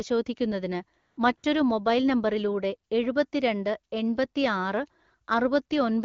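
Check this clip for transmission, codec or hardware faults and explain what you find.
Two short stretches of AMR comfort noise occur, at 0.99 to 1.17 s and 1.37 to 1.43 s, just before "മൊബൈൽ നമ്പറിലൂടെ എഴുപത്തി". The sender judged the talker silent and stopped sending speech frames for 180 ms and 60 ms. The receiver filled those gaps with smooth, steady synthetic noise. Unlike a dropout, these gaps are not dead silence. The real background switches to an even hiss and back, and quiet word endings can be clipped. The wideband coding around them sounds only lightly coloured.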